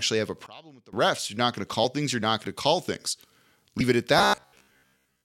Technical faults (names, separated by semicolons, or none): sudden gain jump; compressed frames skipped; robotic sound from repeated short buffers